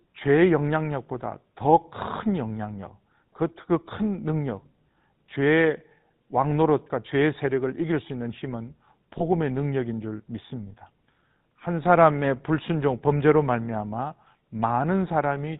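Throughout the speech there is a plainly audible buzzy, gravelly roughness, and the sound is dull and boxed-in with no content above 4 kHz. This is the GSM full-rate codec. It rebuilds speech from a vocal-tract filter driven by evenly spaced pulses, keeping only a third of the excitation detail, which produces the grainy buzz. The amount of damage fits a bitrate around 13 kbps.

From 9.18 to 9.23 s, the speech briefly turns into a short, rough, metallic ring instead of continuing naturally. This comes from lost GSM frames. The decoder filled the gap by reusing the settings of the last good frame, so the sound is held rather than dropping out. The short length fits a single lost 20 ms frame, too brief to fade toward silence.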